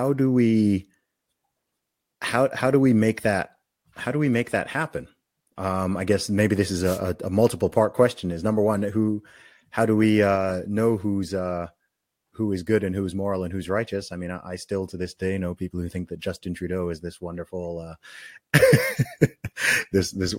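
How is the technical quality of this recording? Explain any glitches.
The recording has one clear glitch, a wireless microphone noise hit. It runs from 6.83 to 7.00 s, lasting about 0.17 s. A brief swish of static cuts across the speech there. The cause is a fade in the radio link of an analogue FM microphone. Reflected copies of the signal arrive out of step and partly cancel at the receiver. As the wanted signal drops, the receiver's own noise rises into the audio. The result is a short burst of hiss over the speech.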